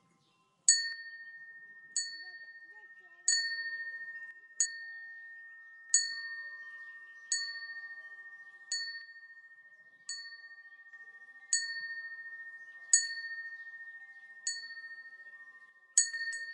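One channel drops out from 0.92 to 3.32 s, 4.31 to 5.90 s, 9.01 to 10.93 s and 15.69 to 16.14 s. Each time the sound falls abruptly by about 6 dB, likely because one stereo channel goes silent before the mono sum, halving shared content and removing anything unique to that side.

Compressed frames are skipped at 4.65 s, inside the second dropout. A few frames, roughly a tenth of a second of audio, never play, consistent with 24 ms frames, so the sound jumps forward.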